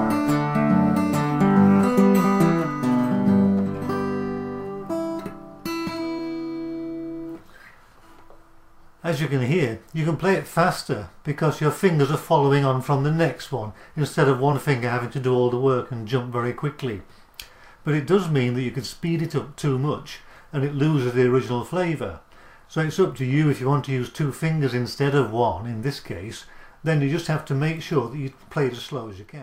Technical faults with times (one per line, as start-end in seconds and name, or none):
4.89 compressed frames skipped
6.18 compressed frames skipped
14.52 compressed frames skipped
26.37 compressed frames skipped